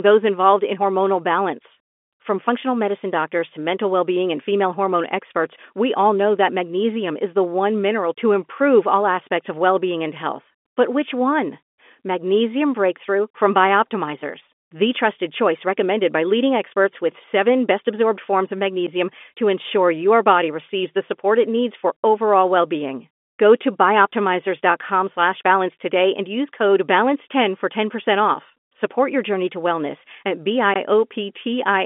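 Nothing's actually wrong in this speech recording; it simply sounds like an ordinary telephone call, with the narrow band you'd expect from the phone line and nothing above about 3.7 kHz getting through.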